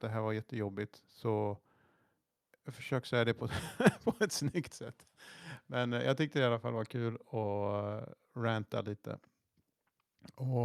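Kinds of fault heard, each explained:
No technical faults can be heard in this speech recording.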